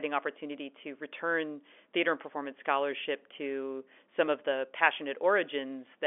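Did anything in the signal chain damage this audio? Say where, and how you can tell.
Yes. A dropped buffer (overrun) at the driver or buffer stage is the likely cause of two brief skips, at 2.33 s just after "to return theater and" and at 4.28 s just after "scholarship to some". At each point roughly 10 ms of audio is missing, and the sound on either side is joined directly with no gap of silence, so it jumps forward. This fits the capture side failing to collect a block of samples before the hardware overwrote it. The telephone-band G.711 path itself, with nothing above about 3.6 kHz, is not the source.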